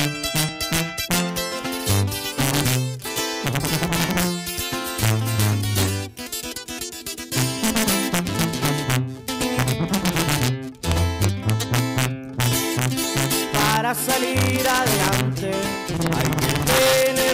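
Integer overflow runs through the whole clip: the gain pushes peaks about 3 dB past the integer limit, and under half a percent of samples wrap to the opposite sign instead of being limited. Each wrapped peak becomes a sharp crack, unlike clipping's flattened, rounded distortion.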